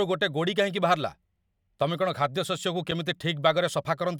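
At 2.91 s the speech drops into a block of digital silence lasting 5.0 ms: a run of samples replaced by silence, most likely because the output buffer was not filled in time. With no fade at either edge, and at this length, it is heard as a tick or dip. Unlike packet-loss concealment, nothing is smeared or synthesised over the gap. The signal simply stops dead.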